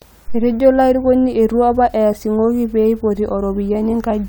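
No faults turn up anywhere in the recording.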